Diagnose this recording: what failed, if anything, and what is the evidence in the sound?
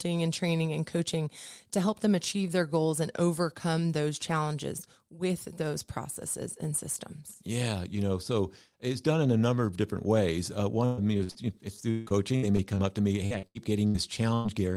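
Repeated packet loss (robotic sound) at the network stage spans 10.85–11.37 s, 11.91–12.78 s and 13.26–13.96 s. Gaps of four or five per stretch, up to 157 ms long, are filled by extending the last sound. This gives a choppy texture with pieces missing rather than the clean dropouts of buffer underruns.

A burst of packet loss at 14.34–14.47 s removes about 100 ms in one run. The receiver stretches the preceding sound and fades it rather than leaving silence, then the speech resumes with that stretch missing. It is a single concealed hole, not a sustained robotic pattern.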